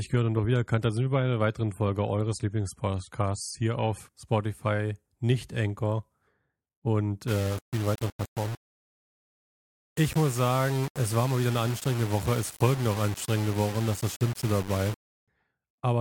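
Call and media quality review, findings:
Adaptive stream starting at a low bitrate, 0.0 to 4.0 s. Dull, artefact-heavy speech with nothing above 13.6 kHz. Player on a low tier, fits 32 kbit/s MP3, then jumps cleanly toward 128 kbit/s.

Low bit depth without dither, 7.28 to 15.28 s. Grainy distortion tracking the speech, with noise not far below it. Likely undithered rounding, consistent with about 5 bits.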